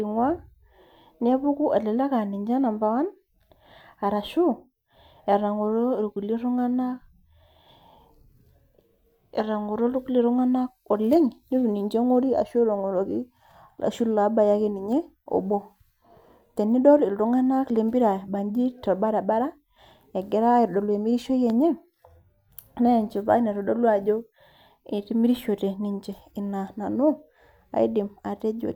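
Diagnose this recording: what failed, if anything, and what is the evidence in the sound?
Nothing failed: no stage of the chain, from capture and conversion through to playback, leaves any audible trace on this speech recording.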